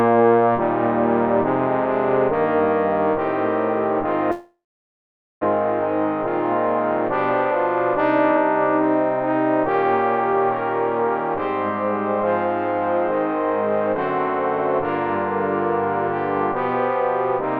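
At about 4.31 s the sound breaks into a fading buzzy hiss, which thins out to near silence and stays that way until about 5.45 s. When the audio resumes, roughly 0.6 s of material is simply gone, and playback ends up running about half a second behind where it was. That pattern is most likely a long network dropout, where the receiver stretched out the last sound it had until it gave up.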